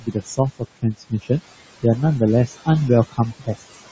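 A short speech clip run through a call's noise suppressor, and you can hear it working hard. The suppressor pulls the room noise down by about 20 dB between phrases, so the background, which sits about 13 dB under the voice, pumps up and down. It also mistakes bits of the speech for noise: you get swallowed, faint patches from 0.00 to 0.39 s (dropping about 16 dB), 0.59 to 1.31 s (about 22 dB, the deepest), 2.47 to 2.68 s (about 11 dB) and 3.11 to 3.75 s (about 19 dB). Each stretch only loses about 100 to 300 milliseconds in total, which points to quiet endings and soft consonants getting ducked. The mic processing caps everything at 8 kHz, which is standard for that kind of call path.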